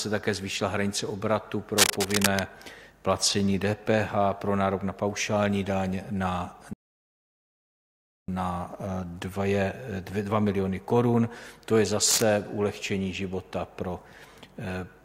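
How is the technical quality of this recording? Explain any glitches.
The recording has three glitches: two bursts of cable scratch noise and one rebuffering stall.

From 1.76 to 2.45 s, and again from 12.06 to 12.23 s, dense, uneven scratching rides over the sound. The first burst is roughly as loud as the sound itself; the second is somewhat quieter. The likely cause is a worn cable, connector or control being moved, rapidly changing its contact resistance. Unlike isolated clicks, the noise comes as dense, uneven bursts of rustling.

From 6.73 to 8.28 s, a rebuffering stall cuts the audio to silence and adds 1.55 s. The player ran out of downloaded data and waited for more. Unlike a dropout, the sound resumes exactly where it stopped, so nothing is missing.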